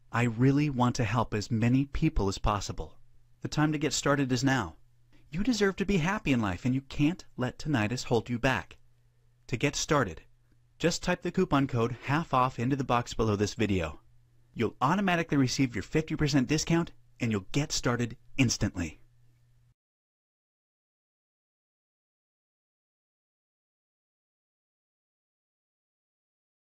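At about 11.34 s there's a skipped compressed frame: roughly one 32 ms frame never gets decoded, so the audio hops ahead by about 30 ms.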